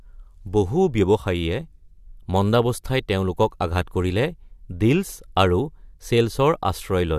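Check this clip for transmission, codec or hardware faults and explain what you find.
Nothing stood out on listening to this speech recording that would point to a problem in its transmission, encoding or playback hardware.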